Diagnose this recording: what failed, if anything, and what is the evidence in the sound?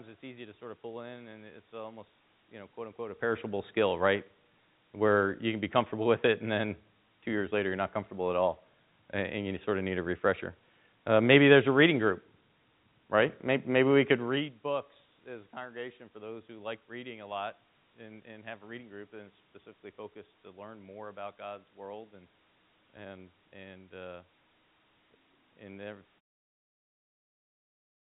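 Nothing in the chain failed: the speech carries the room noise of the recording space and level shifts around 3 s and 14 s as the talker moves, it arrives band-limited to 4 kHz as expected of a 64 kbps G.711 A-law call path, and it ends in a smooth fade-out from about 26 s to 26.21 s, with no stage showing a fault.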